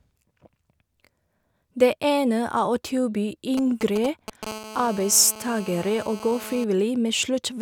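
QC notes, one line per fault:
3.57–4.45 s, GSM signalling bursts: just after "å tilby", the speech picks up a galloping dit-dit-dit of short raspy buzzes, around 10 dB below the voice. A nearby 2G phone is handshaking with its network, sending brief clusters of radio pulses at about 217 Hz, and the audio circuitry rectifies them. What separates this from a steady phone buzz is the grouping: irregular clusters with gaps between them, not a continuous tone.
4.47–6.64 s, GSM phone buzz: the stuttering bursts give way to a continuous, hard, raspy buzz at 217 Hz, about 16 dB below the speech and unrelated to it. The phone has moved into a call and now transmits in every frame, so the rectified pulses form an unbroken 217 Hz tone rich in harmonics. It differs from mains hum because 217 Hz is not a multiple of 50 or 60 Hz, and the buzz sounds buzzy rather than smooth.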